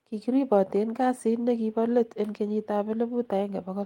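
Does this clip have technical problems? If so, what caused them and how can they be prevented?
No, there are no technical problems in this clip.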